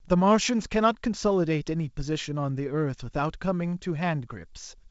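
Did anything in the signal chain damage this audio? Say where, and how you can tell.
No, nothing in the signal chain has damaged this speech. It comes through G.722 wideband telephone coding, with nothing above about 7.7 kHz and only light coding texture in the lower band, which fits the 56 kbit/s mode.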